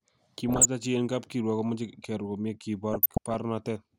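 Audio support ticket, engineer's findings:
DAB burbling, 0.49–0.65 s before "chi en kap kiruok" and 2.92–3.34 s after "kiruok komoche kearor komie". Noise blips in sub-bands, weak reception letting bit errors corrupt MP2 sub-band levels frame by frame.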